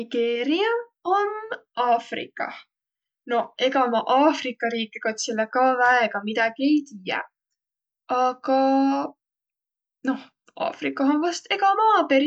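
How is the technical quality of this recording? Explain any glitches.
No technical glitches are audible.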